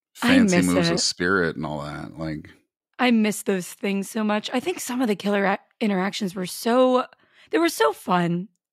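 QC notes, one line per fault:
Nothing stood out on listening to this speech recording.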